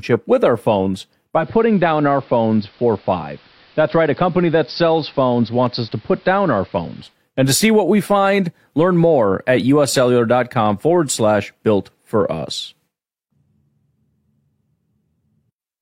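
Just after "with our phones", at 1.35 s, digital radio blending to analogue begins. The receiver cross-fades over 144 ms to the AM broadcast. Treble dulls, level drops about 1 dB, and hiss sits roughly 30 dB down. Digital returns at 7.17 s.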